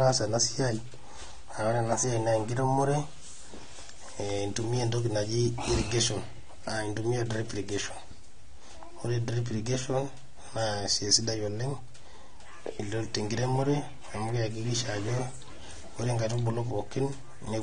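Speech, dull and smeared throughout, with nothing above 9.7 kHz and a warbling, fizzy texture. Likely AAC compression, consistent with AAC-LC at around 32 kbps.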